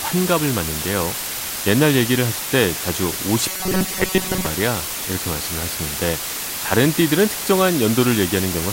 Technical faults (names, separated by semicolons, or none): low bit depth with dither; robotic sound from repeated short buffers